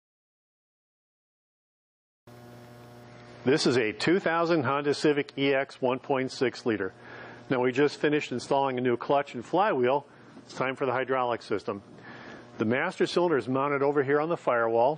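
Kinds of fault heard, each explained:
Adaptive stream at a lower bitrate: at about 3.04 s the quality drops abruptly with no gap and stays that way to the end. The player has switched down to a leaner version of the stream, as it does when the connection slows. Everything above 9.8 kHz is gone, so the top end goes dull, and compression artefacts like swirly smearing creep in. The shift sounds like MP3 going from around 128 down to 32 kbit/s.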